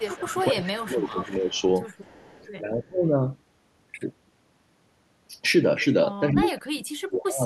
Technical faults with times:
0.00-1.62 echo leak
0.16-1.61 speech suppressed in double talk
2.01-2.47 echo leak
2.82-3.04 speech suppressed in double talk
6.32-7.46 speech suppressed in double talk

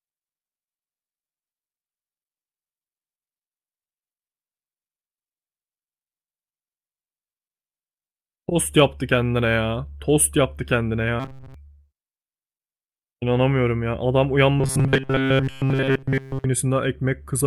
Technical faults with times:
11.20-11.54 robotic sound from repeated short buffers
14.59-16.45 robotic sound from repeated short buffers

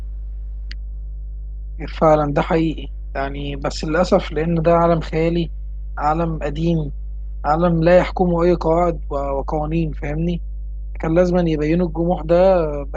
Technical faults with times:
0.00-12.96 mains hum

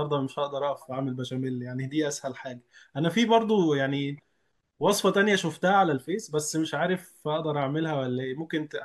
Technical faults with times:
none

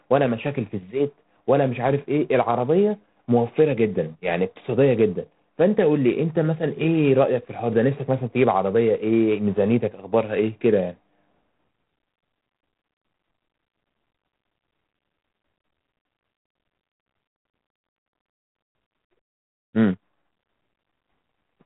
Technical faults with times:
0.00-21.66 G.726 ADPCM

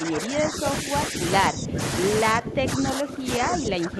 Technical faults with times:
0.00-1.21 speech suppressed in double talk
1.49-1.80 speech suppressed in double talk
2.24-4.00 speech suppressed in double talk

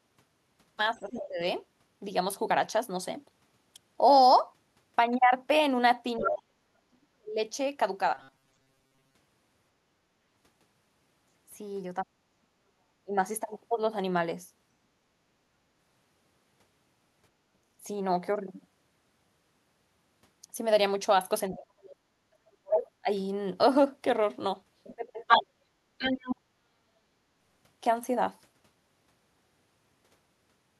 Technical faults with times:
0.93-1.40 speech suppressed in double talk
0.96-1.27 other side's voice leaking through
6.18-7.39 speech suppressed in double talk
6.19-6.29 other side's voice leaking through
8.14-9.15 robotic sound from repeated short buffers
12.03-13.16 speech suppressed in double talk
21.51-25.18 speech suppressed in double talk
21.53-26.36 other side's voice leaking through

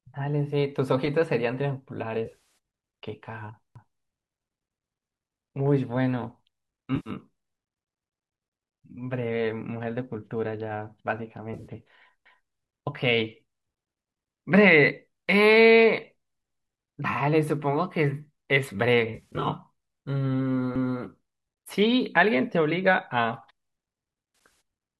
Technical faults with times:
2.25-2.35 AAC frame loss with concealment
3.76-4.01 overlapping chunks
6.96-7.10 AAC frame loss with concealment
11.54-11.67 AAC frame loss with concealment
12.26-12.51 overlapping chunks
19.14-19.48 AAC frame loss with concealment
20.76-21.01 overlapping chunks
24.45 AAC frame loss with concealment

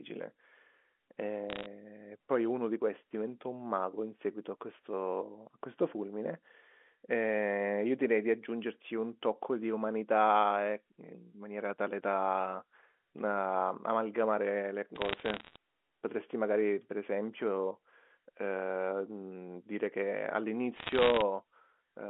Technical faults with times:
1.50-1.66 bit errors on a digital phone line
14.96-15.56 bit errors on a digital phone line
20.76-21.22 bit errors on a digital phone line

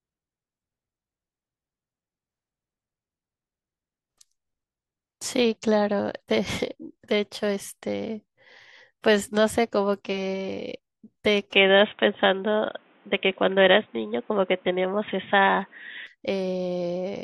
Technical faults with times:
11.53-16.07 input switched to a poorer device

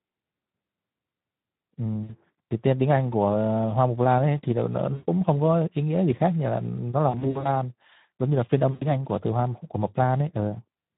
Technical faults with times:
0.00-10.97 Speex codec
2.03-2.14 VoIP packet loss concealed by the speech codec
4.93-5.09 VoIP packet loss concealed by the speech codec
7.09-7.49 VoIP packet loss concealed by the speech codec
8.71-8.85 VoIP packet loss concealed by the speech codec

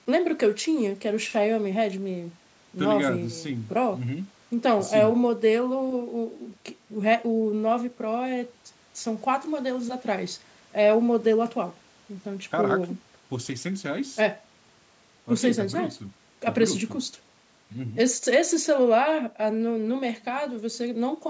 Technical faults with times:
none

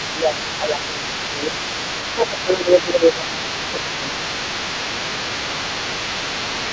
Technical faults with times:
0.00-1.62 speech suppressed in double talk
0.00-6.73 other side's voice leaking through
2.15-4.40 speech suppressed in double talk

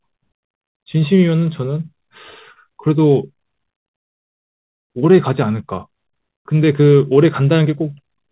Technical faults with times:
2.52-2.58 short concealed packet loss
3.96-4.90 playback stall
4.90-7.90 time-compressed catch-up

